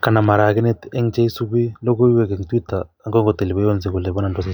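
A speech recording, and nothing is technically wrong with it.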